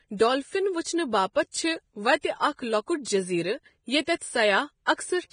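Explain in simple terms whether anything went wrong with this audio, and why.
Yes, two things went wrong. The whole clip of speech sounds hissy and grainy. Nothing comes through above 9.7 kHz, so the crisp top end is gone. The fine detail that remains in the treble has turned into a rough, noisy texture. This is likely heavy Vorbis compression. The file was squeezed hard, and the codec kept only a rough outline of the high sounds instead of their real detail.

The second problem is pre-echo. It happens twice, at 2.21 s and at 4.16 s. Just before a sharp sound starts, a brief hiss creeps in, about 26 ms long the first time and 57 ms the second. The codec works on short chunks of sound and spreads its noise across each whole chunk. So noise meant for the loud start also leaks into the quiet moment before it, and the start sounds softened.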